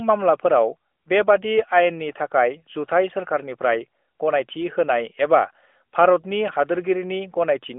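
Listening to this speech, nothing stood out as a technical fault.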